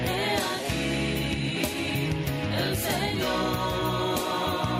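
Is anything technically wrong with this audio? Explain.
No, nothing technically wrong here.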